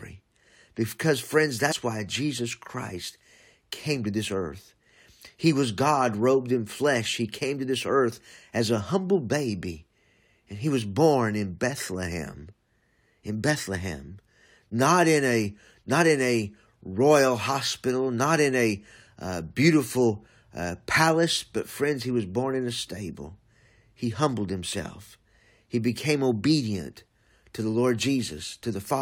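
At 1.71 s, just after "because friends", there is damaged data in the compressed stream. Some bytes in the coded speech are wrong. The decoder misreads those frames, loses sync and hunts for the next valid header. The result is a brief glitch.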